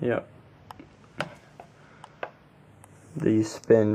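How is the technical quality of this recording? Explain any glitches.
The technical quality is let down by two separate problems: a slow stereo drift that runs the whole way through, and two short decoding glitches.

The channels drift apart for the entire clip. The left and right sides seem to come from devices on separate clocks that disagree by something like 70 parts per million, so the delay between them keeps sliding, ending up at a fraction of a millisecond. Fold it to mono and the resulting comb notches creep through the spectrum, which you hear as a slow, watery flanging.

There's damaged data in the compressed stream at 0.65 s and again at 3.18 s. At each point a bit of the encoded file is wrong, so the decoder misreads those frames, loses sync and hunts for the next valid frame header. Each one comes out as a brief glitch lasting barely a hundredth of a second.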